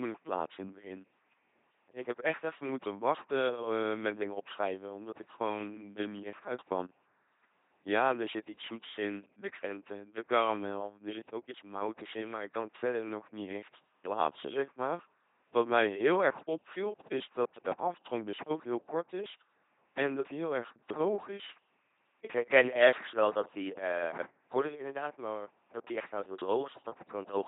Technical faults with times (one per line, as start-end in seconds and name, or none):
0.00-27.47 LPC-10 vocoder